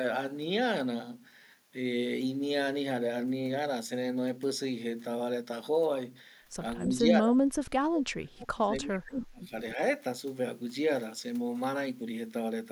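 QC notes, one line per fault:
6.85–9.52 s, speech suppressed in double talk: speech sinks and breaks up, down about 35 dB at worst, likely echo-canceller ducking; spectrogram shows faded, gappy bands.
9.75–9.81 s, speech suppressed in double talk: a brief dip of about 5 dB, likely the same canceller clamping down; waveform shows a small notch in the envelope.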